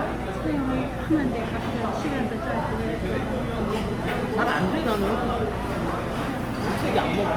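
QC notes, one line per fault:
Throughout, Opus compression: tonal parts turn grainy, rough and noisy rather than swirling, because bands short of bits get folded or noise fill instead of the empty holes MP3 leaves. Bandwidth stays full to about 20.2 kHz, likely a music-mode encode near 24 kbps.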